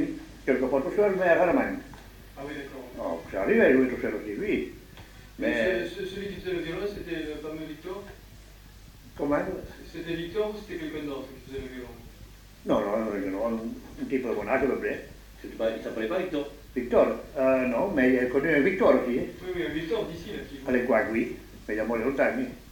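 Nothing in the audio stood out as a technical problem on listening.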